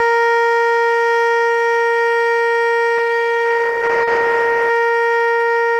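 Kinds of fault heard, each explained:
DC offset: The whole music waveform sits shifted off zero by a constant amount throughout. You won't hear it as such, but it eats into headroom and shows up as steady energy right at the bottom of the spectrum.
Call bitrate drop: From about 2.99 to 5.25 s the music gets coarser and rougher as the encoder is starved of bits, which fits a fall from roughly 32 kbps to 13 kbps. It bottoms out for about 1.2 s before recovering.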